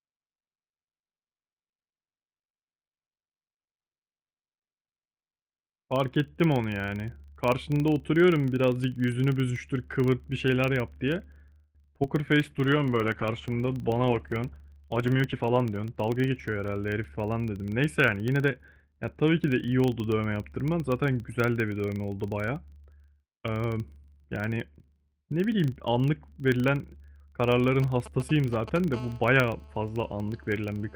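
A low, regular buzz at 25 Hz runs under the speech from start to finish, rising and falling with the level of the talking. It is a filter restarted on every block: the filter discards its stored state at each block boundary and begins again from silence, so every block opens with a small transient. Those clicks repeat 25 times a second, which fits a block of 40 ms, and they grow louder as the speech gets louder.

From 12.41 s to 17.78 s the speech turns rough and watery, with the top end dulled. This is a call bitrate drop. The bandwidth estimate fell, and the encoder was moved from 32 kbps to 13 kbps. It stayed at its lowest rate for about 3.8 s, and at that rate it codes the speech coarsely and discards the higher frequencies. The speech stays degraded until the bitrate climbs back.

Within that stretch, from 14.87 s to 16.31 s, the speech sounds hurried, running about 15% faster with its pitch unchanged. 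This is a jitter buffer speed-up. The receiver was holding more audio than it aims to, so it trimmed short slices one or a few pitch periods long, again and again. Together they removed roughly a fifth of a second to bring the delay down.

Between 27.82 s and 28.78 s a galloping dit-dit-dit of short 217 Hz buzzes appears, around 15 dB below the speech. These are GSM signalling bursts. A nearby 2G phone was sending short groups of radio bursts while setting up, and the audio circuitry rectified them. Each group carries the 217 Hz burst rhythm, so the sound comes as clustered pulses rather than a continuous tone.

From 28.94 s to the end a hard, raspy buzz at 217 Hz sits steadily under the speech, about 25 dB down and bright with harmonics. This is GSM phone buzz. The same phone is now in a call and transmitting bursts continuously, 217 times a second. The audio path rectifies each radio pulse into a click, and the clicks merge into a buzz that has no relation to what is being said.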